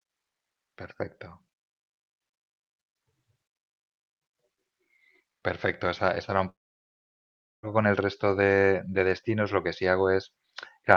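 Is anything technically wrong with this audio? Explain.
Yes. A long network dropout runs from 6.49 s to 7.66 s. The speech breaks off, and the last sound is briefly stretched into a fading buzz before about 1.1 s of silence. Speech returns at 7.66 s with roughly 1.14 s of it simply gone. This is likely a stall in packet delivery. The receiver tried to fill the gap by extending what it last had, then gave up and played silence until the stream resumed.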